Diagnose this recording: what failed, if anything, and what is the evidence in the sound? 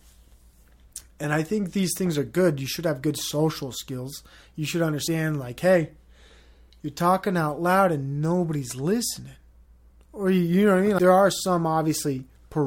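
The failure is in the codec stage: damaged data in the compressed stream at 10.99 s, just after "know what I mean". The decoder hit corrupted frame data, lost sync and hunted for the next valid frame header, leaving a brief glitch in the speech.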